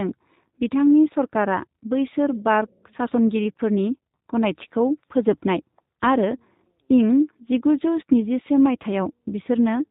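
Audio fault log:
throughout, G.729 codec: The speech is bandlimited with nothing above 4 kHz, so it sounds dull and telephone-like. Its texture is plainly rough and synthetic. The codec does not send the waveform itself. It rebuilds each 10 ms frame from a vocal tract filter, a pitch predictor and a few pulses. That sparse excitation leaves a buzzy, grainy edge on the speech. The damage fits the G.729A variant running at 8 kbit/s.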